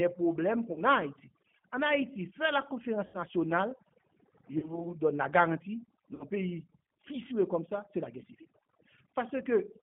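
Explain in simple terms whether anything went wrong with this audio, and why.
Several things went wrong. Overdone noise removal makes the background drop and break up into twinkling specks, and quieter parts of the speech were removed along with the hiss.

The G.729 codec, a telephone-grade speech compressor, carries only about 150 Hz to 3.4 kHz, so the speech sounds muffled, slightly rough and synthetic throughout.

VoIP packet loss concealed by the speech codec occurs at 0.72–0.78 s, 3.06–3.18 s, 4.58–4.86 s and 6.15–6.25 s. The decoder filled the gaps by stretching the last sound into a fading buzz or noise, and the speech stays weak briefly afterwards.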